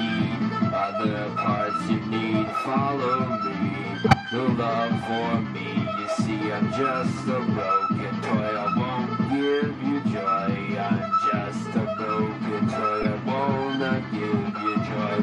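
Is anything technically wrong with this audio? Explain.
Yes, there are two stretches of corrupt frames decoded. Bit errors damaged compressed frames, and the decoder played them anyway, so misread gains and codes put energy at the wrong frequencies for the span of the bad data. From 4.04 to 4.14 s, a few consecutive frames produce a loud glitch peaking around -5 dBFS. From 13.01 to 13.06 s, a couple of frames cause a shorter, quieter glitch.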